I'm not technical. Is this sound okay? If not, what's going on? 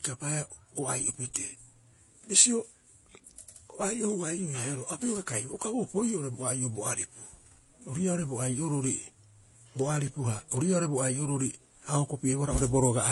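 No. The speech was most likely squeezed by one lossy codec and then re-squeezed by a second, which points to a Vorbis-to-HE-AAC chain. This transcoding between lossy codecs stacks both sets of smearing and swirl throughout, and nothing above about 11.4 kHz survives, so it sounds dull.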